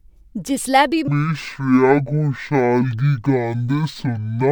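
At 1.08 s, just after "जिसलै बी", stereo is read as mono: interleaved left and right samples are taken as one channel, so from there to the end the speech plays at half speed and an octave low, with a faint mirrored image in the upper spectrum.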